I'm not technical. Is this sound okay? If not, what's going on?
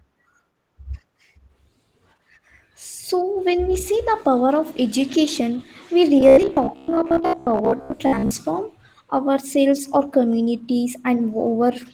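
No, there are two problems, one throughout and one brief.

The whole recording has audible Opus voice compression. Opus shrinks speech by keeping a rough outline of the voice and throwing away fine detail. Here it was squeezed hard enough that you can hear it: the speech comes across somewhat muffled and slightly hoarse, with a faint synthetic edge, as if the voice were being rebuilt rather than simply played back.

From about 6.21 to 8.34 seconds there is robotic sound from repeated short buffers. The speech turns into a stiff, metallic buzz that still roughly tracks what's being said. The likely cause is that fresh audio wasn't arriving in time, so the software kept replaying tiny slices of about 15 milliseconds to fill the gaps. Around half of that stretch seems to be repeats rather than real sound. Those rapid repeats hum at about 67 times a second.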